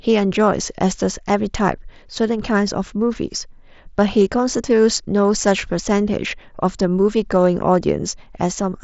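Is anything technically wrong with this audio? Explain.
No, nothing technically wrong can be heard here.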